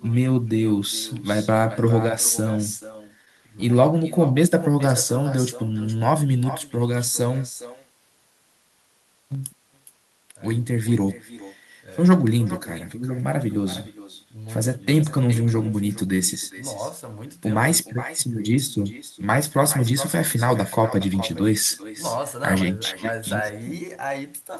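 Speech runs through the whole recording with an echo with no canceller behind it. Every phrase returns about 15 dB quieter, about 0.4 s later. The copy sounds thinner than the direct voice. This happens when the far end plays the call on a loudspeaker and its microphone sends that sound back across the network, with nothing to remove it. The delay is the round trip of that loop. Between 2.61 and 3.64 s there are scattered short gaps. Around seven tiny dropouts fall in that second, the longest only about 15 ms. Together they add up to something like 70 ms, a small share of the span. Each is heard as a brief tick or smear rather than silence. That points to a few lost or late packets, with the receiver covering each hole by stretching the sound just before it.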